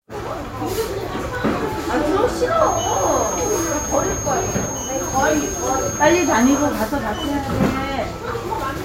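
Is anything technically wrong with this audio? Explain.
Yes. From 2.55 to 6.76 s a feedback whistle sits at 6.5 kHz, roughly 10 dB under the sound, likely from a speaker-to-microphone loop just short of runaway. It shows as a thin horizontal line on a spectrogram.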